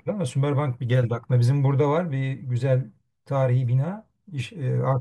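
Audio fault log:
No faults detected in this speech recording.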